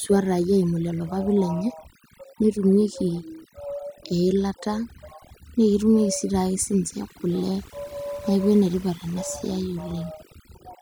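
Throughout the recording, the background collapses into near silence dotted with twinkling specks. That is overdone noise removal: noise reduction set far too strong switches off frequency bands near its noise estimate, taking quieter parts of the voice with them.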